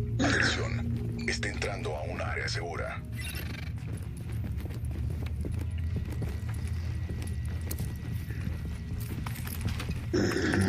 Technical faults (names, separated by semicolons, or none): none